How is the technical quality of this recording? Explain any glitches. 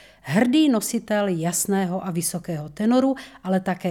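No glitches or technical faults can be heard anywhere here.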